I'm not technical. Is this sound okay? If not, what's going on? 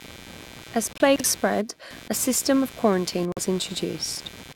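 No. Three kinds of fault can be heard in this speech recording.

Computer activity noise runs through the whole clip: a buzz that pulses roughly a hundred times a second, sitting clearly below the speech. The computer's processor, graphics chip or mouse draws changing current, and that disturbs the shared electrical ground the audio circuit relies on. The buzz follows what the computer is doing, not what is being said.

There are two corrupt frame muted faults. The first is a sudden silence from 0.93 to 1.01 s, just before "spread a system of". The second runs from 3.32 to 3.39 s, right after "a system of quarantine". In each case part of the compressed data was damaged, the decoder rejected those blocks, and the player filled the gap with silence. The lengths suggest about three blocks were lost the first time and two the second. The timing afterwards stays correct.

A chunks out of order fault follows soon after the first gap, from 1.16 to 1.24 s, also just before "spread a system of". 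A short piece of audio, about 40 ms long, arrived one slot late and played after the piece that should have come after it. No sound is lost, but that moment comes out jumbled.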